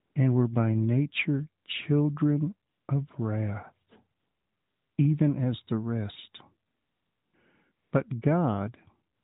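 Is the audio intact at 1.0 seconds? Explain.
Yes, the speech at 1.0 s is intact, with no fault at that moment beyond the band-limited sound of the AMR narrowband mobile codec carrying it.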